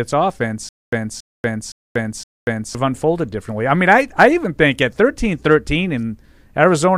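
Speech clip with a stutter with silent gaps from 0.69 to 2.75 s. A 278 ms fragment plays four times, each followed by 237 ms of digital silence. The likely cause is a stalled stream replaying its last buffer. Audio resumes at "unfolded differently I mean".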